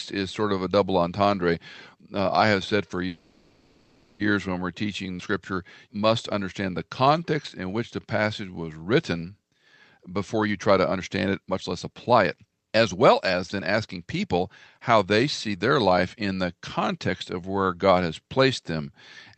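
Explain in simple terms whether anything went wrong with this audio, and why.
Right after "I have said for", there's a call audio freeze from 3.07 to 4.22 s: the sound stretches into a fading buzz, likely from delayed packets, then resumes at "when we're".

From 10.15 to 17.92 s, a jitter buffer speed-up trims tiny slices to catch up, so the speech runs about 14% faster at the same pitch and sounds rushed.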